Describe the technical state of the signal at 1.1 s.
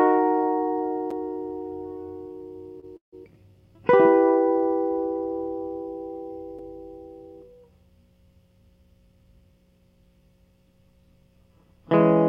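At 1.11 s a block of digital silence interrupts the music: about 7 ms of samples drop to silence with no fade, leaving a sharp tick.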